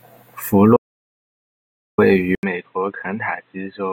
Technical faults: audio dropout to silence; input switched to a poorer device

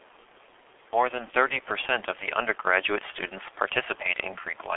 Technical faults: G.723.1 codec

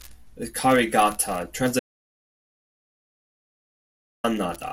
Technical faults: audio dropout to silence

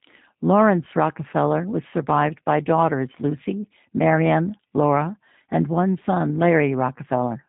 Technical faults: G.729 codec

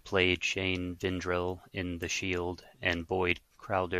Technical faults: dropped samples

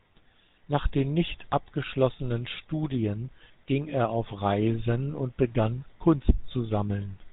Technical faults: GSM full-rate codec

